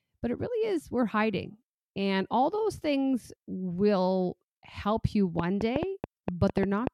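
A speech clip with a train of clicks running from 5.39 s to 6.88 s, starting just after "things will help you" and lasting to nearly the end. The clicks arrive at about 6 per second but unevenly spaced, around ten in all, each with much the same sharp shape and peaking roughly 15 dB above the speech. The likely cause is electrical interference from nearby equipment or a faulty connection or power supply injecting repeated pulses into the signal.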